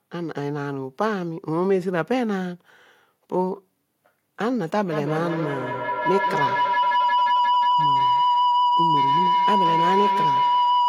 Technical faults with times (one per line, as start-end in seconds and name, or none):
4.92-10.88 feedback howl